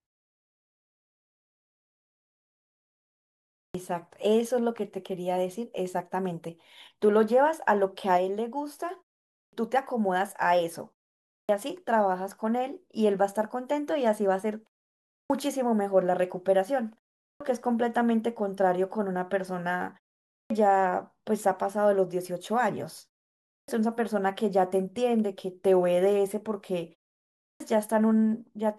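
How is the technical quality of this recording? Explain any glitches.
The recording has one recurring glitch: clipped start after a pause, at 3.62, 9.41, 11.38, 15.17, 17.29, 20.38, 23.57 and 27.48 s. Each time the speech resumes from silence, roughly 110 to 130 ms of the onset is missing, even after gaps as short as 0.38 to 0.61 s. The output device drops into a sleep state during the silence and needs that long to wake and lock again, so phrases begin abruptly, without their first sounds.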